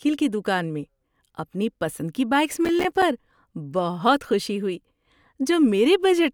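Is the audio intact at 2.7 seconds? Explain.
No. Just after "اپنی پسند کی بائیکس", processor overload crackle runs from 2.58 to 3.02 s. The processor keeps missing its buffer deadlines, and each miss leaves a tiny hard-edged silent gap, consistent with roughly 5 ms buffers. Together the gaps tear the speech into gritty crackle until the load passes.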